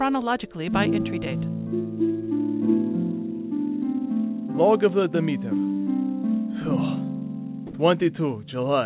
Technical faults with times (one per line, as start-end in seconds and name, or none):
7.67-7.73 sound dropped by the voice detector